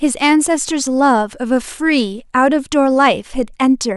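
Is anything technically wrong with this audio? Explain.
No, nothing is technically wrong with this audio.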